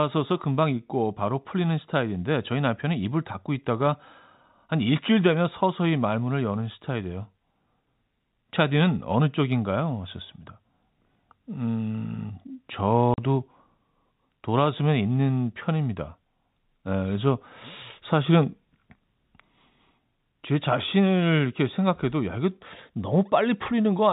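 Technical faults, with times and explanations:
13.14 to 13.18 s, packet loss filled with silence: the speech drops out for 40 ms. Audio went missing in transit and the receiver inserted silence. The gap fits two lost 20 ms packets. The speech is carried in the telephone band, which stops at 4 kHz.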